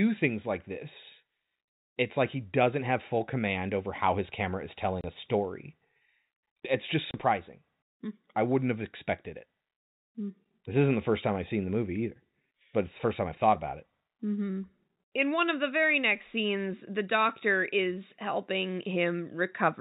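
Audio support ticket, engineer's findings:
Packet loss filled with silence, two dropouts: 5.01–5.04 s, between "how his camera is" and "a story", and 7.11–7.14 s. Each a 30 ms hole with hard edges, which fits one lost 30 ms packet each time. Jitter buffer's inserting silence, not concealing. Narrowband telephone-band sound consistent with G.711 mu-law.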